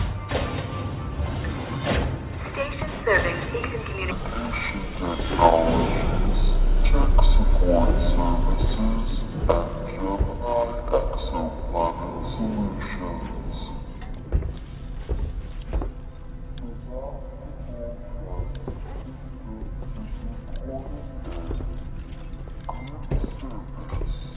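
Wrong sample rate from 4.11 s to the end of the clip: the audio abruptly runs at half speed and drops a full octave, 12 semitones, with tempo and pitch falling together. That fixed 0.5 ratio points to material recorded at 16 kHz being played back at 8 kHz with no rate conversion.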